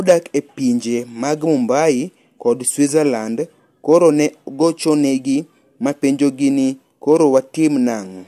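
A speech recording with no technical fault to report. Nothing in the audio calls for a time stamp or a cause.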